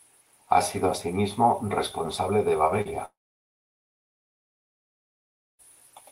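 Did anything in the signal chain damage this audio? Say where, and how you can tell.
Yes. Just after "sido asimismo responsable de", around 2.81 to 2.87 s, a short concealed packet loss leaves a brief smear. About 40 ms never reached the decoder in time, so it extended the preceding speech and blended back. A spectrogram shows smoothed, repeated harmonics with no fresh onsets.

From 3.05 to 5.61 s there is a long network dropout, likely from the call's transport path. About 2.5 s is missing. A short synthetic tail fades out, then roughly 2.46 s of silence follows before speech resumes. The waveform is flat across that gap, and the spectrogram is blank.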